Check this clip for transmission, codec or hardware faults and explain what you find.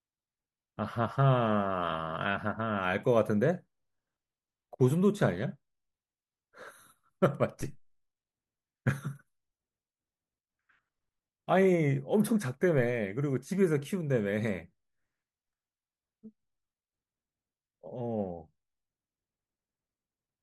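There's one fault here: a DC step at 7.61 s. The waveform's zero line suddenly jumps by about -34 dBFS, then drains away as a 2 Hz high-pass pulls it back. You hear a single low thump, while the speech carries on unaffected.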